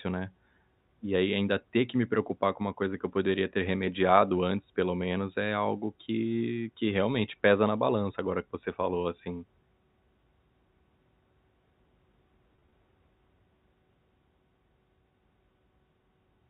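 From 12.56 to 12.72 s there is packet loss with pitch repetition. About 80 ms goes missing in gaps of 20 ms or less, spread over 160 ms. Each gap is filled by repeating the last pitch period, so it sounds briefly held and buzzy rather than silent or clicking.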